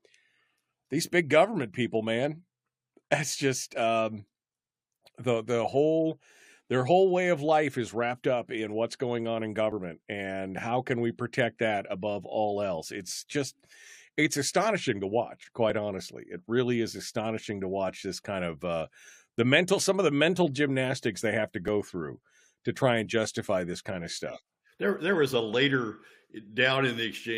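Tiny skips hit the speech at 3.74, 9.72, 15.70 and 21.68 s, roughly every 6 s. That's overlap between stream segments: adjacent chunks claimed the same few milliseconds, the player trimmed real audio, and the waveform jumps across the gap.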